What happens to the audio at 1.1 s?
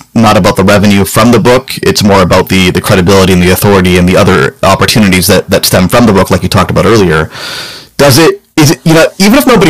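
At 1.1 s you're hearing the same hard clipping that runs through the whole clip. The speech is driven about 20 dB past what the chain can pass, so its peaks get sliced flat, and nearly a third of the samples end up pinned at the limit. Those squared-off tops throw harmonics way up the spectrum, so every loud moment comes through as a harsh, gritty fuzz.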